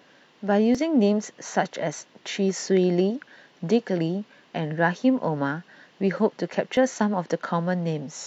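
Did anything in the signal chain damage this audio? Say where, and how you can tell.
Yes. The damage comes from an overlap between stream segments at the network or streaming stage: adjacent segments carry time stamps that overlap, and the player trims the overlap even though that audio was never duplicated. About 33 ms of speech is removed at 0.75 to 0.78 s, and about 39 ms at 6.77 to 6.81 s, six seconds apart, which fits 6-second segment boundaries. Each cut makes the waveform jump, heard as a brief click or tiny skip.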